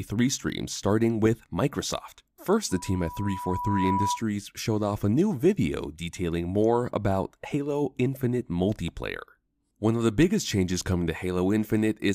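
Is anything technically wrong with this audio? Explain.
Yes. Loudspeaker feedback squeal runs from 2.71 to 4.23 s, ending just before "showed off a new". The microphone picks up its own loudspeaker, and near 978 Hz the loop gain passes one. That tone grows over about a second into a steady squeal roughly as loud as the speech.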